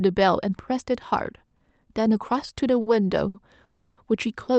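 At 2.81 s and again at 3.28 s, the speech hangs briefly. These are short stalls from a late packet. The jitter buffer ran dry, so the last sound was stretched for 50 ms, then 60 ms, with a slight buzz or dip. Nothing is lost; playback resumes where it stopped.

From 3.64 to 3.99 s comes a call audio freeze. The sound is held as a buzz or hiss that fades but never reaches silence. It adds about 330 ms, then the speech picks up intact. Packets held up in transit are the likely cause.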